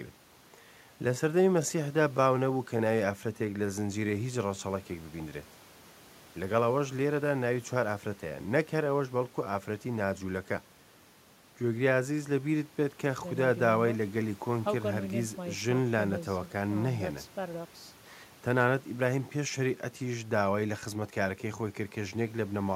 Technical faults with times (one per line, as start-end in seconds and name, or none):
none